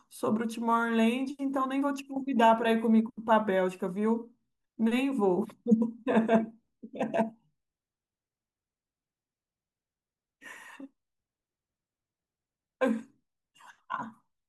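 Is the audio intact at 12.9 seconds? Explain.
Yes, the speech plays through cleanly at 12.9 seconds, with no dropout, click, distortion or other fault audible at that moment.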